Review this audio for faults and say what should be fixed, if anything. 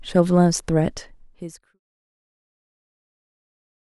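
Nothing needs fixing; no faults are audible here.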